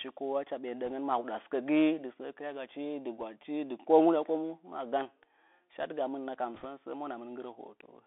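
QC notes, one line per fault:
throughout: Bluetooth CVSD headset codec. The speech sits in a narrow band of roughly 300 Hz to 3.6 kHz, with a grainy hiss under it, scratchy s sounds and a rough edge on loud high-pitched parts where the one-bit step can't keep up. All of this fits a 64 kbps CVSD stream.
0.87–0.92 s, 3.21 s (just after "səə kɨrya gachi dɨ"), 6.54–6.65 s: bit errors on a Bluetooth voice link. Each spot has a short burst of rushing crackle rather than sharp clicks, because every flipped bit only nudges the waveform a little. The last burst is the roughest, with an error rate of around 1.5% against under 1% in the first two.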